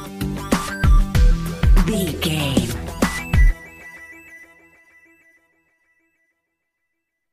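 No technical faults can be heard anywhere in the recording, and the signal stays steady and intact throughout.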